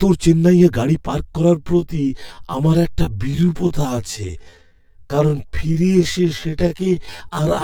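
A channel delay, with one side lagging the other by roughly 10 ms before the two are summed to mono, runs through the whole speech. Shared content cancels at regularly spaced frequencies starting near 40 Hz, giving comb filtering that sounds hollow and phasey throughout.

From 1.53 s to the end, the speech slows to about 0.64 of its pace while its pitch stays unchanged, so it drags. This is likely a time-stretched section, with software repeating short fragments to lengthen the audio.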